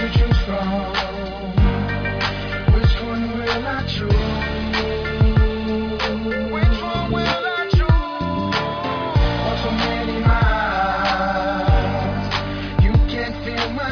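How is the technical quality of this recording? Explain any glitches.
No technical faults are audible in the recording; the signal runs without any glitches or interruptions.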